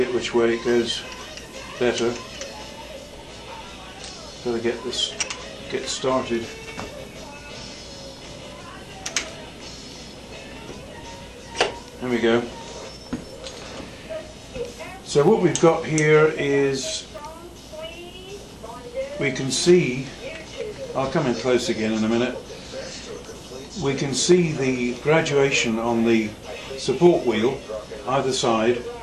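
The sound skips briefly at 5.23, 11.21, 17.18 and 23.16 s, roughly 20 ms lost each time, six seconds apart; likely audio missing between chunks. A waveform shows abrupt splices without silence, and a spectrogram shows thin vertical seams at each join.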